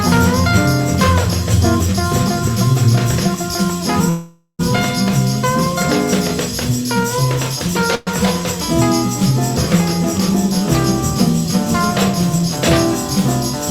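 Two call audio freezes, 4.09–4.61 s and 7.95–8.09 s, hold the last sound as a fading buzz, likely delayed packets; nothing is skipped, unlike loss.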